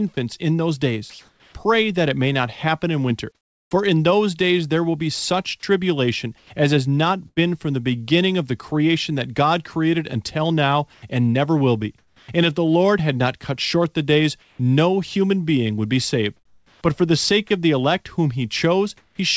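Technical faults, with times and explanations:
1.10–1.55 s and 10.93–12.28 s, comfort noise in place of the background: Between "in those" and "that it may not", about 0.45 s of room sound is replaced by a smooth, even hiss. The later stretch loses about 0.39 s the same way. The sender likely stopped transmitting once it judged the input to be silence. The receiver then filled the gap with synthetic noise. The real background sits about 40 dB below the loudest speech. The level shifts by about 2 dB and the texture goes flat.
6.38–7.39 s and 14.41–19.18 s, sound chopped by the voice detector: After "will be such tribulation" and before "from the beginning of", about 0.2 s of material drops out in pieces. After "cut short the days", the loss grows to about 0.87 s over nearly five seconds. Soft syllable edges vanish. The likely cause is a voice detector switching transmission on and off repeatedly.
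12.18–12.28 s, onset clipped by the voice detector: The first 0.1 s of a word is missing, so it starts abruptly without its soft attack. Comfort noise sits where the beginning should be. The detector was likely slow to register that speech had resumed, so those opening moments were never sent. Throughout, nothing is heard above 8 kHz, which fits a wideband call codec such as G.722.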